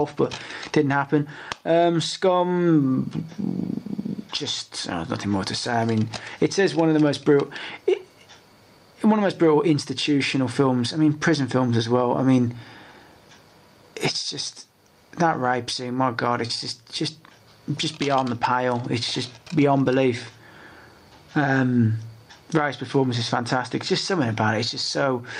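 No technical faults are audible.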